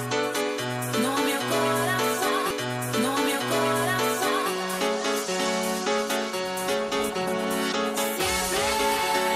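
At 2.50 s a small blip marks a jump back, and the preceding two seconds of audio play again until 4.50 s. It's a stream segment repeated: the player fetched or queued the same 2-second segment twice, adding 2 s to playback.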